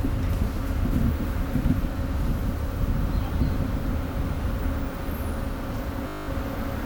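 At 6.08 s the audio locks into a system hang loop that lasts until 6.28 s. The host or driver stalled while the playback hardware kept re-reading the same 20 ms stretch of its ring buffer, so that fragment repeats exactly ten times. Because the loop is so short, it fuses into a steady 50 Hz buzz rather than a distinct stutter. When normal playback resumes, essentially nothing of the sound appears to be missing.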